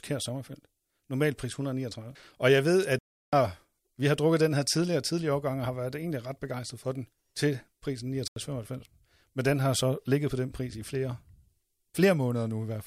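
At 2.99 s the speech drops out abruptly and returns at 3.33 s, a hard gap of about 341 ms. A shorter hole of about 85 ms follows from 8.28 to 8.36 s, heard as a brief dropout. Both are blocks of digital silence: whole runs of samples were written as zeros, likely because the output buffer was not filled in time. The lengths fit 16384- and 4096-sample buffers.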